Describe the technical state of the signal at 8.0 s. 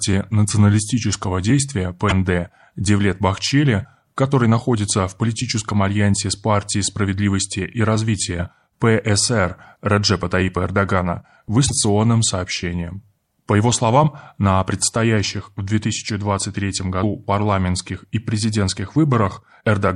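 At 8.0 s, as throughout, the speech has likely passed through MP3 compression at a low rate, consistent with 64 kbps. The starved encoder cuts treble and flickers weak frequency lines, leaving watery, swirly sibilants.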